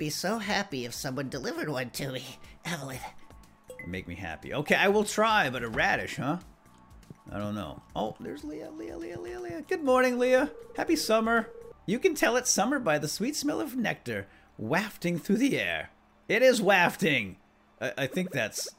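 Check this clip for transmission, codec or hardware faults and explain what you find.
No transmission, codec or hardware faults are audible anywhere in the clip.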